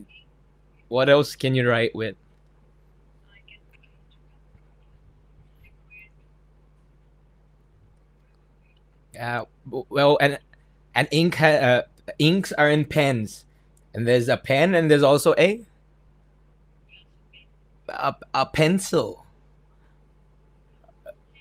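From start to finish there's mains hum sitting under the speech, a steady low drone at 50 Hz with a few low harmonics stacked above it. Something let the power line leak into the signal path, most likely a ground loop or a transformer sitting too close to the cabling. It's roughly 30 dB below the speech, a low hum that runs through the pauses as well.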